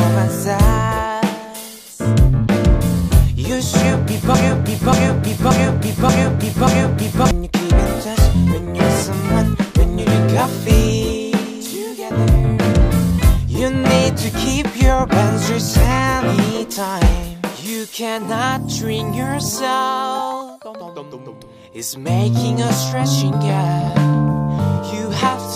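At 4.34 s the audio catches on a short fragment, about 0.58 s long, and plays it five times back to back, identically each pass, until 7.31 s. That's a broken-record loop: whatever was feeding the output, likely the player, encoder or stream, stalled and kept resending the last chunk it had. You hear a stuttering, mechanical repeat, and the material that should have filled those three seconds never arrives.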